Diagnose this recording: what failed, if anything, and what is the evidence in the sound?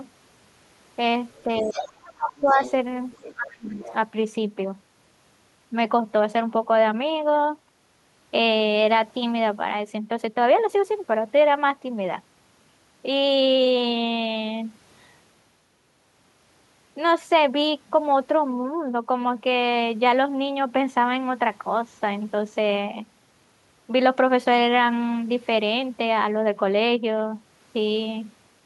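Call processing failed: the other side's voice leaks through at 1.35–1.43, 1.6–1.89, 2.3–2.71, 3.11–3.34 and 3.69–3.93 s. The leak ranges from faint to only about 10 dB under the talker, most likely loudspeaker echo the echo canceller did not fully remove.

Speech is also suppressed in double talk. The talker dips or breaks up from 1.45 to 2.6 s and from 3.35 to 3.84 s, by up to about 30 dB, while the echo plays. The likely cause is the canceller attenuating both voices when it could not separate them.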